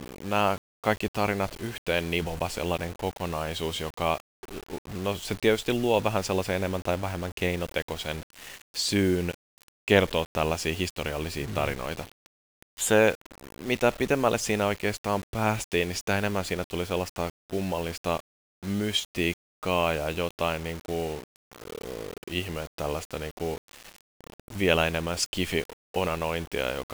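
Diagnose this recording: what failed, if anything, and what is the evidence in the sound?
Grainy distortion that follows the speech throughout, about 20 dB below it: likely low bit depth without dither at sample-format conversion, consistent with 6-bit rounding.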